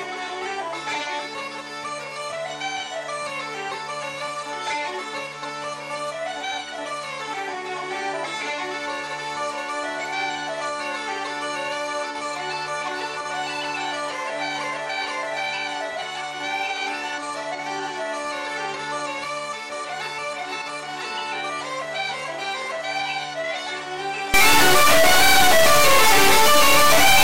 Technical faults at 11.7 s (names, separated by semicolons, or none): none